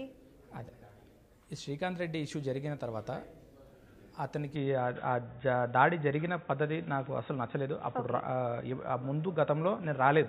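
From 4.56 s on, the sound turns dull and boxy with nothing above 3.8 kHz, a level shift of about 5 dB, faint new background noise and no gap. Band, level and noise all changing together, not just the top end, marks an input likely switched to a poorer device.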